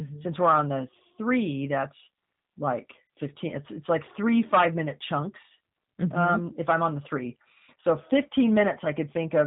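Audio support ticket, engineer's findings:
Whole clip: speech band-limited, nothing above 4 kHz, slightly rough, synthetic texture, plainly audible. Probable component: G.729 codec in the VoIP path. Pitch predictor, vocal-tract filter and sparse pulse excitation rebuild the voice, consistent with an 8 kbit/s G.729A stream.

3.07–3.10 s, right after "the three that's like": brief buzzy or noisy smear lasting about 30 ms, fading, with weak, distorted onset after. Probable component: VoIP packet loss concealed by the speech codec. The decoder extrapolated from the last pitch and filter with falling gain, a gap that fits three lost 10 ms frames.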